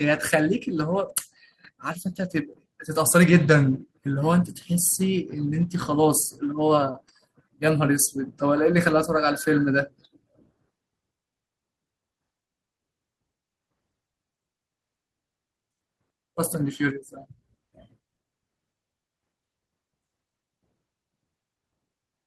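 No technical faults can be heard anywhere in this recording.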